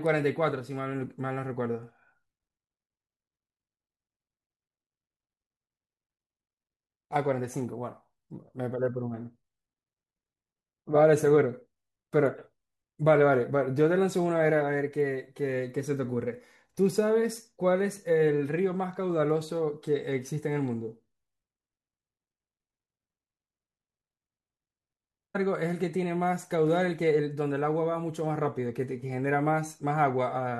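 At 25.34 s the speech jumps forward abruptly with a brief blip, as though a piece of the recording has dropped out and playback has resumed further along. The continuity breaks sharply rather than fading. The likely cause is a stream segment skipped: one chunk of the segmented stream failed to arrive or load, and the player moved straight on to the next segment, leaving a gap in the content.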